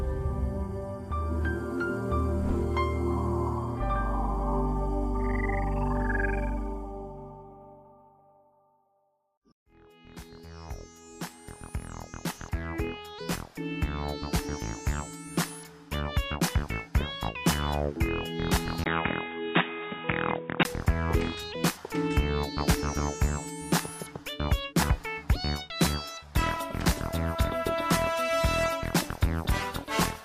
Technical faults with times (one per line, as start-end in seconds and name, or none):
18.84-20.65 input switched to a poorer device